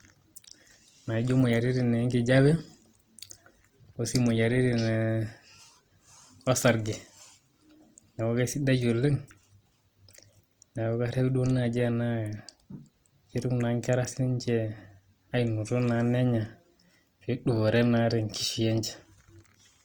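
From start to finish the speech has a grainy, rough texture, with tones turning noisy rather than clean, and some harmonic detail replaced by a fuzzy wash, yet without hollow swirling gaps. The damage is plainly audible. The likely cause is Opus compression in its CELT music mode at a low rate, consistent with about 24 kbps: band energies are held while starved bands are filled with folded or noise content. Bandwidth stays full, extending to about 20.2 kHz.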